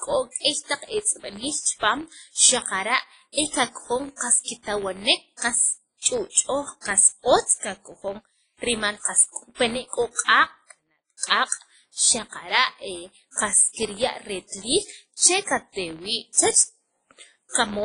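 From start to finish, a filter in the chain loses its internal state at each block boundary and restarts from silence, so every block opens with a small transient. Those transients repeat at 86.1 Hz, which fits a 512-sample buffer, and they merge into a buzz under the speech. Because each restart kicks against whatever signal is arriving, the buzz rises and falls with the level of the voice rather than sitting at a constant volume.

Also throughout, the speech carries heavy codec damage, likely from WMA compression at a low bitrate, in the region of 24 kbps. A transform coder of this kind quantises long blocks coarsely, so its error smears over tens of milliseconds and weaker spectral detail is dropped. The result rings and sounds washy, with a hiss that swells and fades with the speech. Nothing remains above about 10.1 kHz, which dulls the top end.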